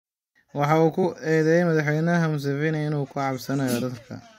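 Damaged data in a compressed stream appears twice in this speech, first from 1.02 to 1.04 s and again at 3.81 s. In each spot some of the encoded bytes were lost or corrupted, so the decoder could not read those frames properly, lost sync and had to hunt for the next valid frame header before playback could continue. Each event is a brief chirp or blip, roughly 20 ms long, cutting into the speech.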